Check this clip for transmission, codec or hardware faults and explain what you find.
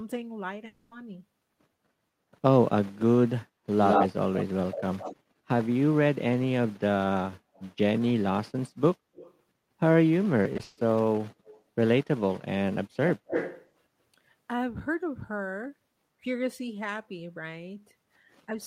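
There are four kinds of fault in this speech clip, with echo leak the most frequent.

From 0.67 to 0.93 s there's a long network dropout, likely from a stall in delivery. About 240 ms was lost and patched by stretching the last sound, so you hear a fading smear rather than silence.

Echo leak shows up at 3.82–5.16 s, 7.56–7.66 s, 9.15–9.34 s, 11.45–11.61 s and 13.07–13.68 s. The likely cause is a far-end canceller letting loudspeaker sound back through. The copy trails by 102 ms in the first four, ranging from roughly as loud as the speech down to barely there. In the last it trails by 232 ms and is fairly strong.

Between 10.43 and 10.79 s, repeated packet loss leaves four gaps, the longest 140 ms. Over half that stretch is concealed, which gives a choppy, robotic texture.

At 18.46 s the speech is suppressed in double talk, likely the canceller ducking during overlap. It dips by around 10 dB for roughly 40 ms.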